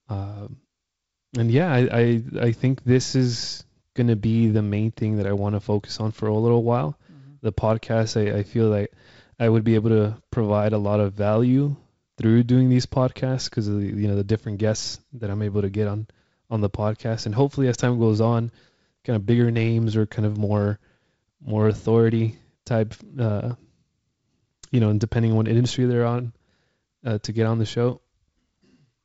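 Speech, with no technical faults to report.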